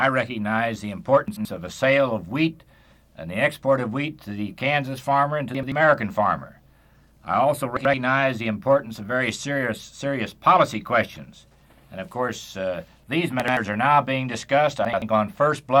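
Chunks out of order: an 85 ms chunk played one position late, swapping with its neighbour, jumbling the audio at 1.28–1.45, 5.55–5.72, 7.77–7.94, 13.40–13.57 and 14.85–15.02 s.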